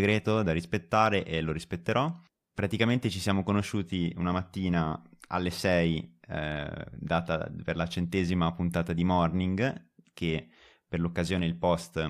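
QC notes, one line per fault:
Nothing to flag here; I went through the speech and didn't hear anything that needs a QC line.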